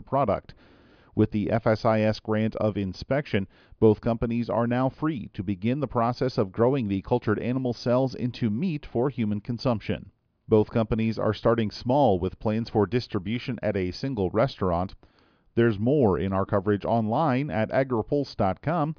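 A speech recording with no technical fault to report. Nothing heard in it calls for a fix or an explanation.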